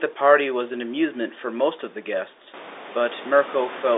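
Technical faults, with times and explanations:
No technical faults are present.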